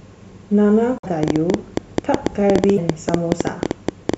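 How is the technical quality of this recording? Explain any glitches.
The recording has two kinds of fault: a pair of brief MP3 decoding glitches and a train of clicks running through most of the clip.

The broken MP3 bit reservoir appears from 0.98 to 1.06 s and again from 2.76 to 2.79 s. The likely cause is missing MP3 frames, each about 26.1 ms long. The frame after each gap reaches back for reservoir bits that are no longer there and decodes someone else's bytes instead. The speech skips forward, and for a few tens of milliseconds there is a garbled burst or a short hole in place of the sound.

The train of clicks runs from 1.23 s to 4.15 s. The likely cause is a repeated electrical pulse, from interference or a struggling interface, getting into the signal. Around thirty similar clicks arrive at roughly 9.4 per second, unevenly spaced, peaking about 15 dB above the speech. They come through as a persistent ticking layered over the voice, and they stay audible in the pauses as well.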